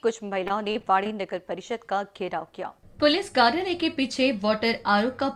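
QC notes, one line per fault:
0.43–1.09 s, repeated packet loss (robotic sound): six short dropouts in quick succession, the longest about 38 ms. Each hole is bridged by extending the preceding sound, roughly 113 ms of fill in total, while about 140 ms of the original is gone. Nearly a fifth of the span is synthetic continuation, and the repeated stretched fragments give the passage a choppy, robotic texture with pieces missing.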